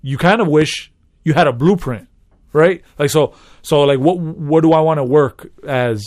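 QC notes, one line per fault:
0.62–0.64 s, loud pop: a single sharp pop lands between "you kind of" and "you had a blueprint", peaking a few dB above the speech, which carries on uninterrupted beneath it. It sounds like a brief electrical pulse added to the signal, most likely from a switch, a connector being disturbed, a static discharge or a driver glitch. The pulse lasts about 20 ms, so the ear takes it as a click-like thump riding on top.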